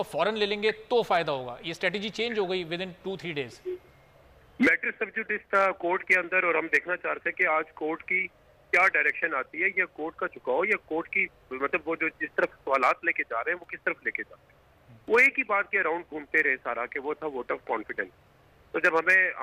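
No dropouts, clicks, distortion or timing errors turn up anywhere in the recording.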